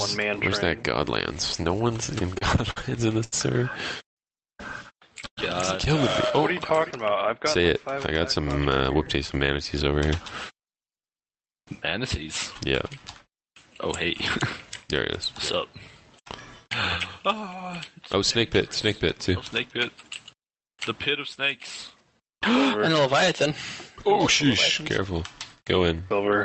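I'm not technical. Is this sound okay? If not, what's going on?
No. From 2.07 to 5.39 s there are repeated stalls (stutter): the audio arrived late nine times, and each gap was covered by stretching the last sound, so it drags and hiccups.

Two jitter buffer speed-ups follow. The system had stored too much audio and trimmed tiny slices, so the sound runs slightly faster and hurried from 7.58 to 9.88 s, and again briefly from 25.95 to 26.21 s.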